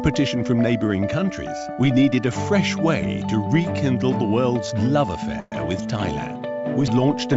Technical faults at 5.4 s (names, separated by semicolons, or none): call audio freeze